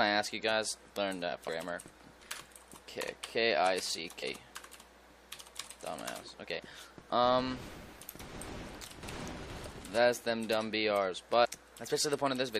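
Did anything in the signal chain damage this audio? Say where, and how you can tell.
Yes, codec stage: damaged data in the compressed stream causes brief glitches at 4.22 s and 11.44–11.46 s, where the decoder misreads frames and loses sync.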